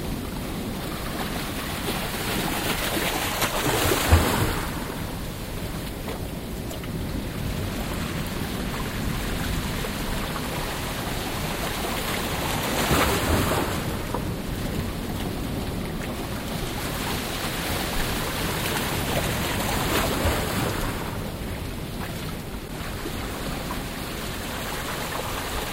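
Corrupt frame decoded: damaged bits in a few compressed frames were decoded as if valid, putting energy at wrong frequencies. Short spurious bursts, each spanning two or three frames, interrupt the sounds at 6.70–6.75, 20.49–20.57, 22.68–22.70 and 24.55–24.62 s.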